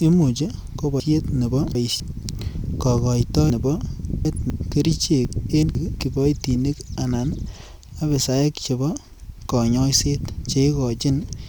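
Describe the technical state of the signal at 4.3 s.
A jumbled, garbled stretch runs from 3.5 to 4.5 s. It comes from chunks out of order: a 250 ms chunk arrived late and plays three chunks after its proper place. Nothing is missing, but the sequence is scrambled, leaving three abrupt splices.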